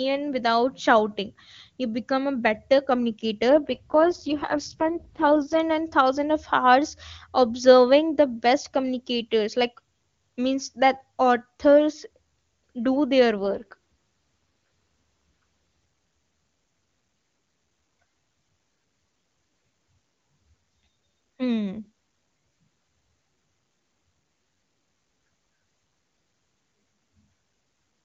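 From 3.50 to 5.60 s the speech turns rough, raspy and synthetic, with no gap and no loss of bandwidth. This is an AMR rate drop: the link pushed the AMR-WB codec down from its clear top rate to what sounds like its lowest rate.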